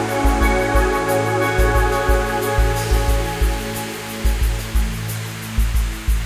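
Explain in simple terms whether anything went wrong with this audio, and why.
Nothing went wrong here.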